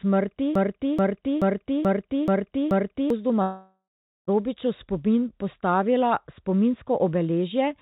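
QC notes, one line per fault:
0.55–3.10 s, broken-record loop: the same 0.43 s chunk plays back to back six times, identical each pass, so the sound stutters in place instead of moving on. Whatever should have come in those two and a half seconds never plays. The likely cause is the player or stream stalling and re-sending the last fragment it held until fresh data turned up. The 4 kHz ceiling of the phone-band call codec applies to every repeat.
3.42–4.29 s, long network dropout: about 0.86 s of audio never arrives and is gone for good. The receiver fills the gap by stretching the last bit of sound into a buzzy tail that fades out, leaving roughly 0.44 s of near silence before the sound resumes further on, missing the lost stretch. That fading fill, then a dead patch, then a jump ahead, is the signature of a packet stream that was likely interrupted by the network.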